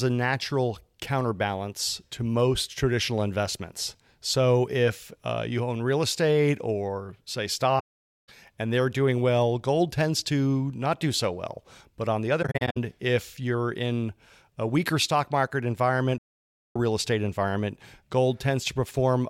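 At 7.79 to 8.29 s the speech drops into a soft-edged silence, then again from 16.18 to 16.76 s, both clear cases of AAC frame loss with muting. The decoder zeroed the missing frames, and the overlapping windows fade the sound out and back in, leaving a hole. Between 12.42 and 12.77 s the losses are scattered, several short dropouts of up to roughly 70 ms, giving a fluttery, chopped patch.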